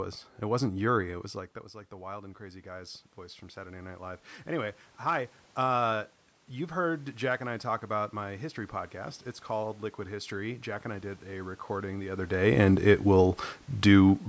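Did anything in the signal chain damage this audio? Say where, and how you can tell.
Yes, automatic gain rising in call processing. Voice and room noise swell together from 1.05 to 5.37 s, by about 8 dB, and from 9.6 to 12.3 s, by about 4 dB, ending before "and it".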